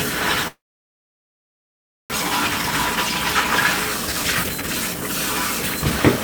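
A long network dropout runs from 0.47 to 2.14 s. The sound carries on briefly as a fading buzz and then goes quiet for about 1.5 s. When audio returns, close to a second of it is simply gone, likely because packets stopped arriving and the receiver could only conceal the gap.

A jitter buffer speed-up follows from 2.22 to 6.18 s. Delayed audio arrived in a burst and left roughly 0.7 s of extra delay. The receiver works this off by cutting many tiny pitch-period slices, so the sound plays about 16% fast at unchanged pitch and feels hurried.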